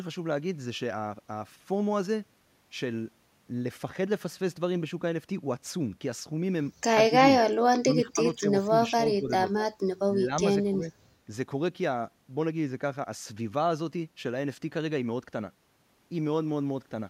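Speech suppressed in double talk at 7.09, 7.81–8.19, 8.35–8.74, 8.92–9.3, 10.06–10.3 and 10.67–10.91 s: the speech dips by roughly 10 to 20 dB, likely because an echo canceller turned it down during overlapping talk. These are level dips rather than clean gaps, so they are not packet-loss dropouts.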